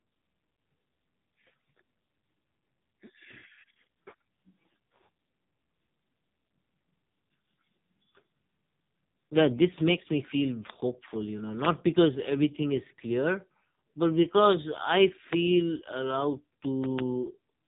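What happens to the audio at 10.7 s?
A single loud pop, from 10.70 to 10.72 s, peaks around 20 dB above the speech. It is likely a voltage spike from a plug, switch or static discharge, and the speech continues underneath. Across this moment, as throughout, AMR narrowband mobile codec coding at a heavily damaging 5.15 kbps removes everything above 3.8 kHz and gives the voice a buzzy, synthetic quality.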